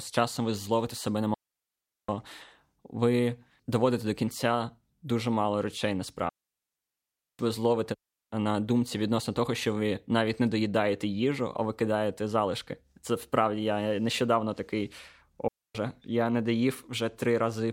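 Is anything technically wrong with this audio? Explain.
Yes, the speech has three digital wireless dropouts: after "ви зловите себе на" at 1.34–2.09 s (0.74 s), after "кінця дуже мало речей" at 6.29–7.39 s (1.1 s), and before "я не" at 15.48–15.75 s (0.27 s). Each time the link lost too much data, so the receiver muted. The result is a clean hole of near silence with a very short fade. An analogue wireless dropout would bring hiss or squelch bursts, but here there is no noise at either edge.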